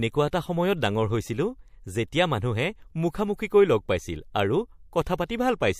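Pre-echo appears at 0.31 to 0.33 s and again at 5.28 s: a brief hiss, about 16 dB above the floor, smears 25 ms and 18 ms ahead of sharp attacks. The codec, apparently never switching to short blocks, spreads quantisation noise across a roughly 36 ms transform window.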